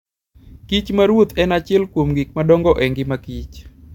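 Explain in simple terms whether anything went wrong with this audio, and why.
Nothing went wrong technically with this speech recording: the signal stays steady and intact the whole way, with no dropouts, interruptions or damage anywhere in it.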